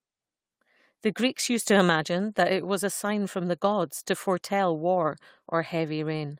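A short speech recording with no technical faults to point to. Nothing in it calls for a timestamp or a cause.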